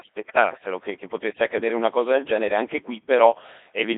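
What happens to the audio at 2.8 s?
At 2.8 s the speech sounds robotic and buzzy, with nothing above 3.8 kHz. This is the Codec 2 vocoder, present throughout, rebuilding the voice from sine waves at a rate that fits about 2.4 kbit/s.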